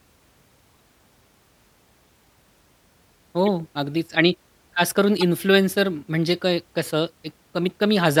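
Corrupt frame decoded is the fault in this speech clip. Compressed frames arrived with flipped bits, and the decoder played them anyway, so misread gains and codes put energy at the wrong frequencies for each damaged stretch. The result is short chirps and noise bursts at 0.69–0.76 s, 3.46–3.49 s, 5.17–5.24 s, 6.28–6.35 s and 7.70–7.72 s. The first and last are faint, and the one at 5.17 s is loudest. Their lengths suggest one to a handful of frames hit each time.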